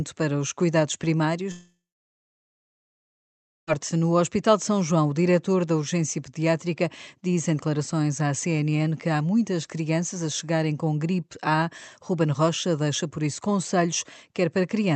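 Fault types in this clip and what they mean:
long network dropout: 1.51–3.70 s, after "para os cuidados"; a brief fading smear, then about 1.9 s of silence, likely lost packets that were never recovered.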